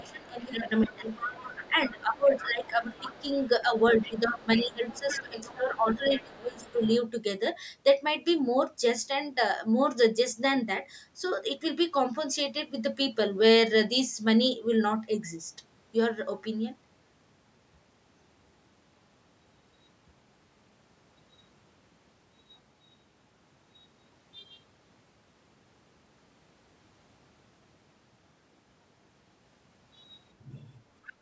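From 0.0 to 0.31 s a faint second voice sits under the speech, about 25 dB down. It returns from 0.79 to 6.98 s, louder, roughly 15 dB below the speech. This is the other side's voice leaking through, likely because the echo canceller left loudspeaker sound in the microphone. A last brief scrap comes at 31.04 s.

Over the same opening stretch the main speech dips: 0.0 to 1.36 s, 1.71 to 3.28 s, and 3.64 to 6.82 s. The drops reach about 15 dB, then about 20 dB. This is speech suppressed in double talk. Likely both sides talked at once, and the canceller turned both down. The band above 8 kHz is empty, from normal call processing.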